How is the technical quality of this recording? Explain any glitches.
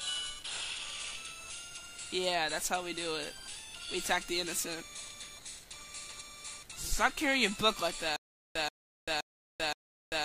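The recording has one glitch, a stutter with silent gaps from 8.16 s to the end. A 130 ms burst repeats four times, each followed by 391 ms of silence, likely from a stalled stream replaying its last fragment. The waveform shows identical blocks separated by flat gaps every 522 ms, and the spectrogram shows matching vertical bands.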